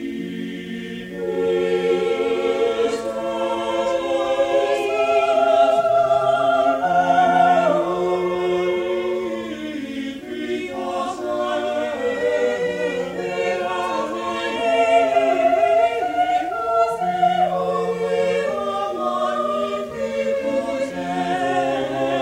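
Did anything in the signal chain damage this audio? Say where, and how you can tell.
No, no stage damaged it.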